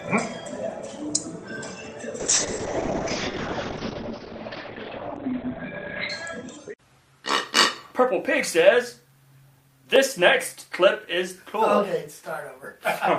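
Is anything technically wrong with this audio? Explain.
Yes, there are two faults.

From 2.2 s to 7.36 s the sound turns rough and muffled, with everything above 4 kHz gone where it previously reached 20 kHz, and it stays at its worst for about 3.9 s before clearing. This is a call bitrate drop: a fallen bandwidth estimate made the encoder code with far fewer bits and strip the high band. The sound points to a fall from about 40 kbps to about 9 kbps.

At 9.96 s a tick or brief dip is heard. This is a block of digital silence lasting 4 ms: a run of zeros replaced the audio, cutting it out and back with no fade. A gap this short is too brief to register as silence.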